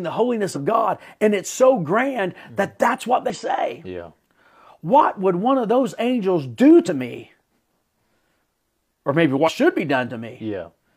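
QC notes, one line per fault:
0.51–0.58 s, 3.30–3.37 s, 6.83–6.88 s, 9.43–9.49 s: damaged data in a compressed stream. Each event lasts about 50 to 70 ms. The speech breaks into a short chirp, squawk, click or short hole, then recovers. The four events are spread fairly evenly across the clip. Bytes in the encoded stream were corrupted at these points. The decoder misread the frames there and lost sync. It produced garbage until it found the next valid frame header.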